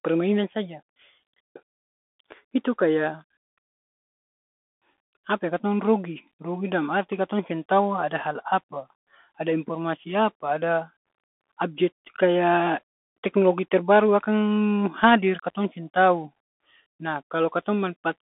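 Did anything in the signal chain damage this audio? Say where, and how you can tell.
Yes, at the codec stage, and it runs the whole way through. This is the Bluetooth CVSD headset codec: the speech sits in a telephone band of roughly 200 Hz to 3.5 kHz, with nothing above about 3.8 kHz. There's a granular hiss under everything, and s sounds come out scratchy. CVSD sends one up-or-down bit per sample with an adapting step, so fast, loud high content outruns the step and smears, which points to a 64 kbps headset link.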